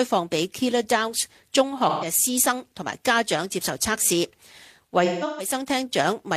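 At 1.89 s there is AAC frame loss with concealment. About 128 ms of coded audio is missing, which fits three lost frames. The decoder patches the gap from the last good spectrum. The result is a smeared, noisy stretch until 2.05 s. From 5.04 s to 5.54 s it happens again, in scattered bursts. About 299 ms goes missing in total. The longest run is around 150 ms. Each burst leaves a brief phasey, washed-out patch.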